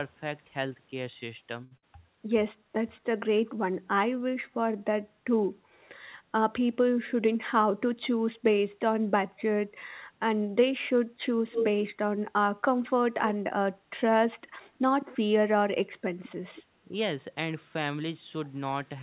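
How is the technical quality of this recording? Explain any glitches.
The recording has several call-path glitches, all within a narrowband sound with nothing above 4 kHz, which fits a G.711 A-law link.

At 1.64 s there is a short stall from a late packet. A packet arrived late and the jitter buffer ran dry, so the receiver stretched the last sound for 70 ms until the packet showed up, then carried on from the same spot. Nothing is lost, but the sound hangs slightly too long with a faint buzzy sustain, and everything after it plays 70 ms later.

Immediately after, from 1.77 to 1.84 s, comes a burst of packet loss. Audio that never arrived in time was concealed by extending the previous sound for about 53 ms and fading it down. Playback then jumps ahead, skipping 60 ms of the recording, so a held, fading sound leads into a small gap in continuity.

Between 5.60 and 5.72 s the background is gated by the echo canceller. 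While far-end audio was playing, the canceller clamped the microphone, pulling the room sound down by about 7 dB for roughly a tenth of a second. The ambience briefly dips and then comes back when the canceller releases.

From 6.96 to 7.73 s there is a jitter buffer speed-up. The buffer held more audio than its target, so the receiver trimmed short pitch-period slices repeatedly, shedding some 70 ms and running at 107% speed. Pitch stays the same, but this stretch sounds slightly hurried.

There are three brief echo leaks, at 11.47 to 11.67 s, 15.01 to 15.06 s and 16.55 to 16.62 s. Each is a copy of the speech trailing 208 ms behind. The first is roughly as loud as the original. The later two are much fainter, about 20 and 25 dB down. The likely cause is a speakerphone on the far side whose echo canceller let part of its loudspeaker output back into the microphone, which then returned it down the line.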